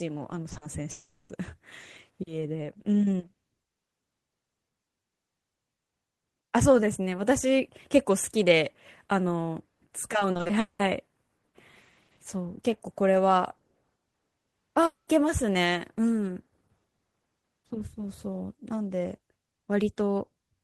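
Between 0.49 and 0.63 s, three short concealed packet losses arrive back to back: 0.49–0.53 s and 0.53–0.57 s each lost about 20 ms, and 0.57–0.63 s lost about 40 ms. The receiver patched each hole by extending the preceding sound, so the speech here smears and wobbles briefly rather than cutting out, and a brief consonant could be swallowed.

From 0.91 to 1.31 s the receiver most likely suffered a long network dropout, with 0.38 s of speech never played. The last sound is stretched into a fading continuation that lasts nearly the whole gap, leaving only about 10 ms of silence before real speech resumes with that stretch missing.

From 10.19 to 10.81 s there is repeated packet loss with a robotic sound. Six separate gaps, the longest 0.2 s, remove about 0.34 s in total, so more than half of this span is synthetic fill. The patches follow one another closely, and the speech turns choppy with pieces missing.

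At 14.85–15.09 s what is likely the same kind of long network dropout recurs. The receiver carries the last sound forward as a fading continuation, about 0.14 s of this stretch is outright silence, and speech returns without the lost 0.22 s.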